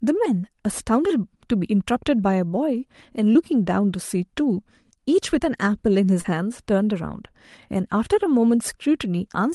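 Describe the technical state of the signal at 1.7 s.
At 1.7 s the speech is intact, with no dropout, glitch or other fault, only the ordinary coding texture and upper-band limit of the call path it travels through.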